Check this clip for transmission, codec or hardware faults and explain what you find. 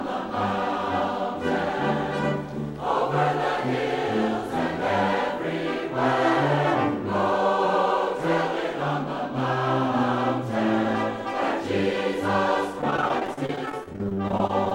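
Choppy, robotic sound runs from 12.81 s to 14.72 s: repeated packet loss. Dozens of short holes, none longer than 33 ms, are each patched by stretching the preceding sound, so about a fifth of that stretch is filled-in audio, which gives the choppy, clipped texture.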